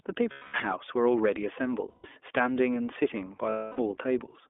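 Throughout, the speech passes only about 300 Hz to 3.5 kHz and sounds slightly rough and synthetic, the plainly audible signature of the iLBC codec, which fits its 15.2 kbps, 20 ms-frame mode. Lost iLBC frames occur at 0.32 to 0.56 s, 1.90 to 2.06 s and 3.50 to 3.79 s. Each time the decoder repeats the last pitch cycle with noise, producing a held, buzzy vowel, and speech recovers immediately afterward.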